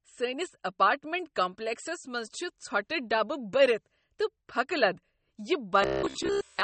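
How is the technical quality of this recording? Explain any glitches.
The recording has two audible faults: compression damage throughout and a robotic buzz at the very end.

Throughout, the speech carries MP3 compression artefacts. Nothing is present above 8.4 kHz, where the encoder has cut the treble, and weak spectral detail flickers between frames, giving a watery, swirly texture and smeared consonants. The plainly audible damage fits a low bitrate, likely around 32 kbps.

From 5.82 s to 6.63 s, the end of the clip, there is a robotic sound from repeated short buffers. The audio turns into a rigid, metallic buzz at about 66.8 Hz that still loosely tracks the speech. That pitch fits the software looping roughly 15 ms blocks while fresh audio arrives too slowly, with most of the real signal in this stretch likely skipped.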